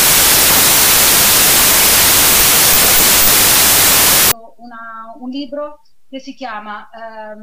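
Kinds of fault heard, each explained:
Wrong sample width: packed 24-bit data read as 32-bit fills the spectrogram with broadband noise until 4.32 s, with faint original traces running 1.33 times too fast.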